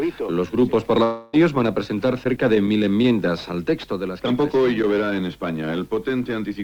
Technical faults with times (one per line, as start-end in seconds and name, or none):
1.03-1.36 long network dropout